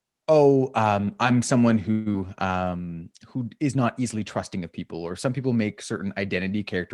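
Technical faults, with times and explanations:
1.91–2.16 s, long network dropout: a stretch of audio likely never arrived. The receiver carried the last sound forward for about 227 ms as a smeared, fading buzz, and about 120 ms of the original is gone. The sound resumes with that piece missing and a delay shift of roughly 50 ms.
2.27–2.96 s, jitter buffer slow-down: the buffer stretched the audio by repeating short pitch periods and bits of pauses, adding 112 ms. The speech plays at about 85% speed with unchanged pitch, sounding drawn out.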